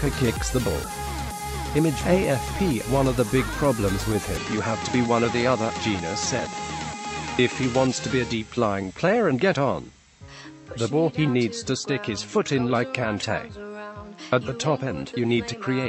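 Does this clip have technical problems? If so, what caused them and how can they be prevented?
Yes. From 4.37 s to the end, everything above 8 kHz vanishes and a faint new background noise appears, likely from the input being switched to a poorer device. That new noise, not just a duller tone, distinguishes it from a simple filter. Locking the recording input to one device prevents it.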